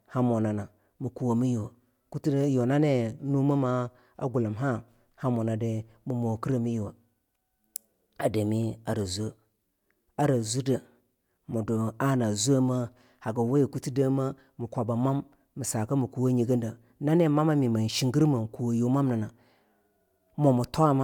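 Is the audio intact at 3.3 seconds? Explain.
Yes, at 3.3 seconds the speech plays through cleanly, with no dropout, click, distortion or other audible fault at that moment.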